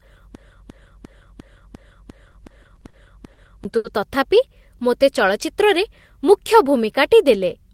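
Right from the top the speech is caught in a broken-record loop that's already under way when the clip starts and runs to about 3.65 s. A chunk of roughly 350 ms plays back to back, identically, nine times, so you hear the same fragment cycling instead of anything new. The likely cause is a stalled player, encoder or stream that kept re-sending the last fragment it held, and whatever should have played in that stretch is gone.

Inside that loop, from 2.31 to 2.96 s, there's also a run of repeated stalls, a stutter. Over seven separate gaps the receiver filled about 100 ms by holding the last sound, the longest single hold around 40 ms. That's a jitter buffer draining over and over because packets came in late or too slowly. Nothing actually goes missing, but the sound hitches and drags through that patch.

Then come two short stalls from a late packet. At 3.33 to 3.40 s a packet arrived about 40 ms late, so the receiver stretched the last sound for 40 ms before picking up where it left off. 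At 3.77 to 3.87 s the same thing happens with a 70 ms delay and a 70 ms hold. No audio is lost in either case. You just hear a sound sustained unnaturally long, with a faint buzzy or dipping quality.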